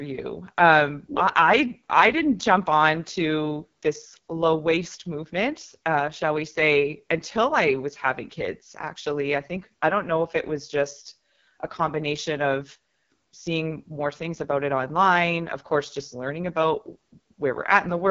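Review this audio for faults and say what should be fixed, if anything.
The speech has passed through the AMR wideband (HD Voice) codec at one of its lowest rates, and the roughness points to 6.6 kbit/s. Below 6.4 kHz, a pulse-driven vocal tract model rebuilds the voice with too few bits, so throughout the clip it sounds heavily rough and raspy. The band above that is filled with shaped noise rather than real detail, and nothing is present above 7.3 kHz. To prevent this, carry the speech at 12.65 kbit/s or higher.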